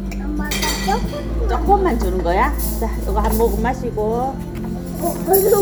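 No technical faults can be heard anywhere in this recording of sounds, and the signal stays continuous and intact throughout.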